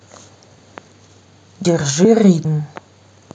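The speech skips abruptly at 1.25, 1.65, 2.05 and 2.45 s, each jump closing with no gap and about a tenth of a second gone. This is likely audio missing between chunks: half-second blocks each losing roughly 100 ms at the handover.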